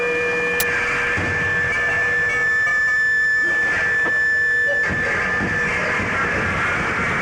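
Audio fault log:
0.60 s, file tags played as audio: in this music clip, a block of metadata holding an embedded cover picture is decoded as if it were samples, giving a brief burst of static about 11 ms long. Compressed image data is effectively random, so it becomes very loud white noise with hard edges. On the waveform it is a solid loud block, and on the spectrogram a vertical stripe of even energy across all frequencies.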